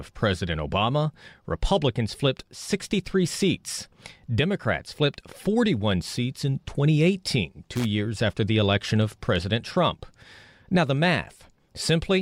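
At 7.76 to 7.85 s, loose connector crackle: a faulty contact briefly chops the speech, showing as jagged dropouts and broadband vertical streaks, heard as scratchy crackle.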